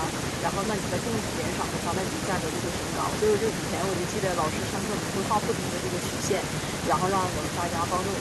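No technical faults can be heard anywhere in this recording.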